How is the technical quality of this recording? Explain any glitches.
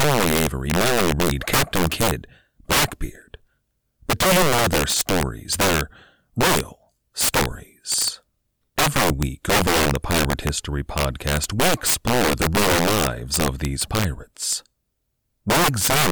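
The recording has a serious fault: integer overflow runs through the whole speech clip. The signal is driven about 12 dB too hot, and on loud peaks, a small share of the samples, the values wrap past the integer limit and flip to the opposite sign rather than being held at the ceiling. Each one is a violent crack, far harsher than clipping, which only flattens peaks into a buzzy distortion.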